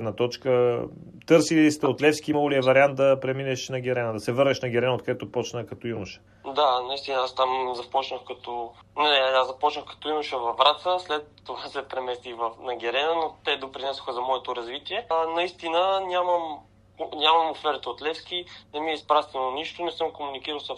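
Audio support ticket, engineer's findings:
Damaged data in the compressed stream at 2.32 s and 8.99 s. Corrupt bytes in the encoded file or transport; decoder misreads the affected frame, loses sync, hunts for the next valid frame header. Audible as a brief chirp or blip, roughly 14 ms each. Two isolated hits, same signature, consistent with intermittent stream corruption rather than a decoder fault. Check source file integrity and the delivery path.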